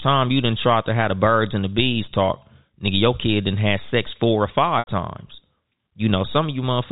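Speech over a G.711 telephone link, so nothing above 4 kHz, with one dropout worth flagging: packet loss with pitch repetition at 4.79 to 4.87 s, right after "have sex four or". About 80 ms went missing, which fits roughly eight 10 ms packets. The receiver bridged the gap by looping the last pitch period, so you hear a brief held, buzzy tone that fades to silence before the speech cross-fades back in.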